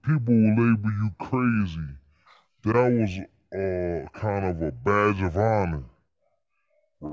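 A wrong sample rate runs through the whole clip, from start to finish. The samples play back slower than they were captured, with no conversion in between, so speed and pitch fall together. The speech runs at about two-thirds of its natural pace and sits roughly 7 semitones low, sounding deep, dragged and sluggish. That ratio fits audio recorded at 24 kHz being played out at 16 kHz.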